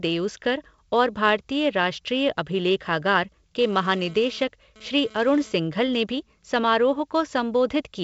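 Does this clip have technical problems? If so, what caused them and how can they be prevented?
Yes. From 3.62 to 5.97 s, between "और भारतीय राष्ट्रीय अभिलेखागार" and "भी समारोह", a hard, raspy buzz runs under the speech at about 24 dB below it, coming and going rather than holding steady. This is GSM phone buzz. A nearby 2G phone transferring data transmits in bursts about 217 times a second, and the audio circuitry rectifies those radio pulses into a 217 Hz tone with many harmonics. Keeping phones well away from microphones, cables and interfaces, or switching them to flight mode, prevents it.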